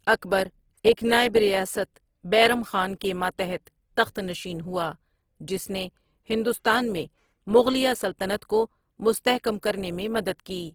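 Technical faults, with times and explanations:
Throughout: Opus compression, likely the cause of a grainy, rough texture that stays plainly audible across the speech. The bandwidth remains full, reaching to about 20.4 kHz. The encoder fills starved bands by folding lower ones or with noise, so the damage fits a low rate near 16 kbps in its music mode. That leaves few spectral holes, which is what separates it from MP3: the sound is grainy and noisy instead of swirling or watery.
3.65 s: pre-echo, a short hiss of about 16 ms just ahead of an attack, after "ریاست بیرم خان کے" and before "تخت نشین ہوا". The attack fell late in a transform block. Noise scaled for that loud moment spread over the whole block, filling the quiet gap before it and softening the onset. A click or dropout would sit on or after the event. This noise arrives just before the attack, which is what identifies it.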